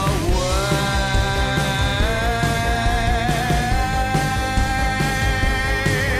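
Nothing stood out as a technical problem anywhere in the recording when listening closely.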